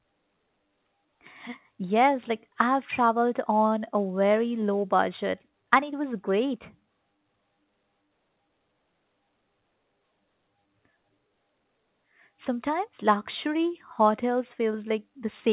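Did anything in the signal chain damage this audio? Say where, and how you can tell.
No, nothing in the chain damaged the speech; one mark of the call path is that nothing reaches above 4 kHz, which fits a narrowband telephone codec such as G.711 A-law.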